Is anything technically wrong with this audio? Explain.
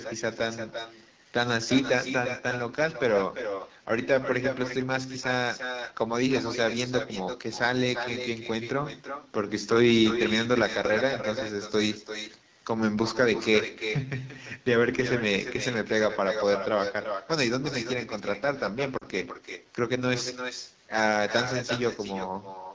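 Yes, three things stand out.

There's echo with no canceller running through the whole clip. The far end is playing the call over a loudspeaker, and its mic sends it straight back, so every phrase gets a thinner shadow about 8 dB down, trailing by roughly a third of a second.

The AMR wideband (HD Voice) codec is running at 8.85 kbit/s, one of its two lowest rates, and the damage is plainly audible. The speech model is starved of bits at that rate, so the speech comes out rough and raspy throughout, with a noise-filled top end.

There are lost AMR speech frames from 18.98 to 19.04 s. That 40 ms gap fits two dropped 20 ms frames. The decoder bridges it by repeating the last good settings at falling gain, so the sound drops to near silence before the speech comes back a bit rough.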